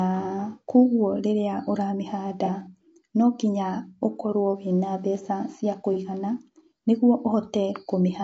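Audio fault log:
Throughout: low-delay AAC compression. The speech sounds rough and grainy, with a hiss sitting between the harmonics and an upper band that seems thinned or synthetic. This likely comes from AAC-ELD at a low rate, somewhere around 32 kbps. Its short frames blur the pitch structure, so on a spectrogram the harmonic lines look smeared and ragged, the gaps between them fill with speckled noise, and the top band looks patchy rather than continuous.
2.45–2.50 s and 5.93–5.97 s: AAC frame loss with concealment. Each is a brief smeared, noisy or phasey patch about 50 ms and 35 ms long. That fits a single missing frame of about 30 ms that the decoder filled in from the last good spectrum. Neither gap lasts long enough to fade toward silence. On a spectrogram each shows a short column where the harmonic detail turns to a flat, noisy copy of the preceding frame. The waveform keeps its level but loses its regular periodic shape there.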